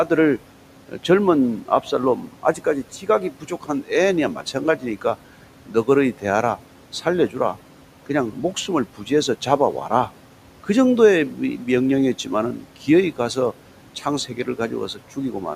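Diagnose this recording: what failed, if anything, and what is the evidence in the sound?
The failure sits in call processing, where noise suppressor artifacts run through the whole recording. The room noise, about 19 dB below the speech, is pulled down by about 12 dB in the gaps and comes back up underneath the speech, so the background pumps with the talker.

The same stage produces speech cut by the noise suppressor in four stretches: 0.08 to 5.05 s, 5.66 to 9.11 s, 12.24 to 13.37 s and 14.01 to 15.17 s. The drops reach about 12, 11, 10 and 8 dB. In total they touch under a second and a half of speech, the largest share in the first span. Soft, low-level parts of the speech fell below the suppressor's noise estimate and were lowered along with the background, so they come out faint and swallowed.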